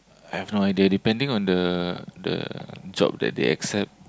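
No technical faults can be heard in this speech recording.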